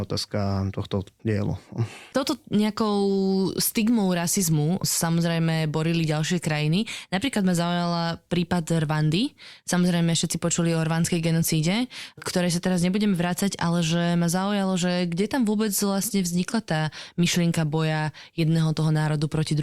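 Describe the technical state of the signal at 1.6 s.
Nothing is wrong at 1.6 s: the speech signal there is intact, with no dropout, distortion or other fault to be heard.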